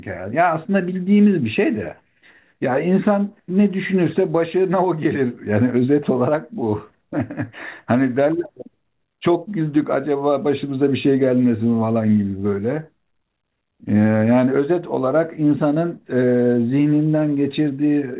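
No technical faults are audible.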